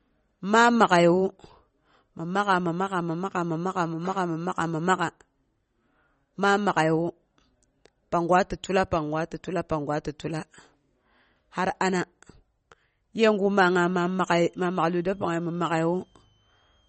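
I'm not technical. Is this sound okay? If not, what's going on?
No. Throughout the clip the speech sounds dull and plainly watery, with nothing above about 8.3 kHz. That points to heavy MP3 compression as the likely cause: the encoder ran short of data, cut the treble and dropped quieter detail.

From 13.51 s to the end there is a faint high whistle, a switching supply whistle near 3 kHz that wanders between about 2.9 and 3.2 kHz. It comes from a power supply buzzing audibly, with its pitch shifting as its load changes.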